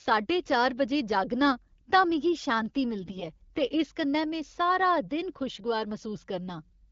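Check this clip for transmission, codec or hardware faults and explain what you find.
One transmission fault is audible. From 3.00 to 3.25 s, just after "तां मिगी शांति", there are AMR bit errors. The weaker-protected bits of each frame arrive corrupted, at a rate of roughly 7 percent, while the core checksum still passes. The speech keeps its pitch and level but turns hoarse, scratchy and gargly. The corruption spans about a quarter second, which fits roughly a dozen 20 ms frames. The surrounding wideband coding sounds clear, consistent with AMR-WB at a mid rate.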